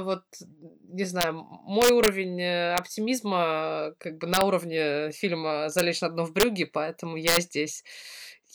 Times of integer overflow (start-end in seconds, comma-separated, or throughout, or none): 1.21-1.23, 1.82-2.08, 2.78, 4.34-4.41, 5.79, 6.40-6.43, 7.28-7.37